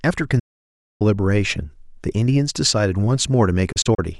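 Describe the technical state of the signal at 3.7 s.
At 3.7 s the signal suffers a digital broadcast dropout, from 3.72 to 3.99 s. The receiver mutes whenever frames arrive corrupt or missing, leaving about 96 ms of speech lost as short holes, none longer than 32 ms, spread across roughly a quarter second. Each hole is a brief cut to silence. On the waveform these appear as flat silent gaps with steep 8 ms fades, and on the spectrogram as thin, full-band blank columns.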